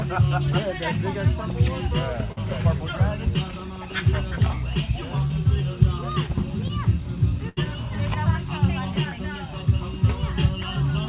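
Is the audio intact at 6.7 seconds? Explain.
No, a short concealed packet loss runs from 6.68 to 6.71 s. About 20 ms never arrived, so the receiver extended the preceding sound into a brief smear, not a silent gap.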